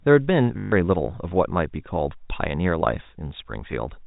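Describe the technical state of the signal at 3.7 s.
At 3.7 s the speech is intact, carried through the band-limited G.711 telephone path with no fault at that moment.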